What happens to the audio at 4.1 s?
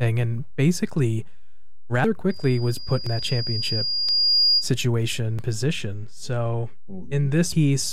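At 4.09 s the speech jumps ahead, with roughly a fifth of a second missing. That's likely a dropped buffer (overrun), where samples were overwritten before being collected and the two sides were spliced together.

It lands in the middle of a loudspeaker feedback squeal running from 2.30 to 4.71 s. The mic is picking up its own speaker, so a 4.8 kHz tone builds over about two seconds until it sits a few dB above the speech.

A DC offset also runs through the whole clip. You can't hear it, but it eats headroom and puts steady energy at the very bottom of the spectrum.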